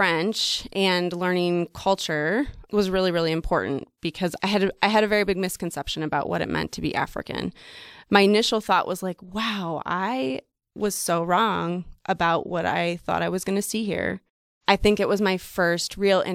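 At 9.32 s the speech carries a corrupt frame decoded: one compressed frame arrived with flipped bits and was played regardless, so misread gains and codes placed energy at wrong frequencies for that frame, heard as a brief, faint chirp, squeak, blip or burst of noise peaking around -45 dBFS.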